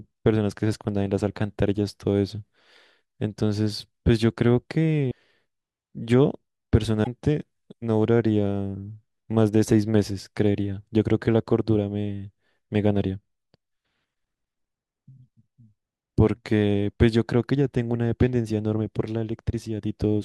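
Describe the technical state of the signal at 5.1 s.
At 5.08 to 5.12 s, about 40 ms, the speech is hit by damaged data in a compressed stream. Corrupt bytes make the decoder misread the frame and resync, producing a brief chirp or squawk. On a spectrogram it appears as a garbled block; the waveform shows an abrupt discontinuity.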